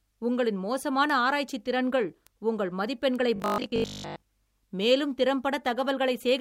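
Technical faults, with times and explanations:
1.10 s, 2.27 s and 3.16 s, bit error spike: At each of these moments a single bit in the stored or transmitted audio flipped, in two adjacent samples at 1.10 s and in one sample at the other two. The affected value jumps by a power of two and snaps straight back. The result is a short, sharp tick with energy across the whole spectrum, unrelated to the speech.
3.36 to 4.22 s, robotic sound from repeated short buffers: Fresh audio is likely arriving too slowly, so playback fills the gaps by looping the most recent chunk while most of the real signal in this stretch is skipped. The repetition imposes a steady 50 Hz buzz, which fits a buffer about 20 ms long. The speech becomes a rigid, metallic drone that only loosely follows the original.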